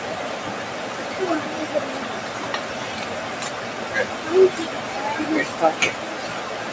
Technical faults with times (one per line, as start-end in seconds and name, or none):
0.00-6.72 noise suppressor applied to music or sounds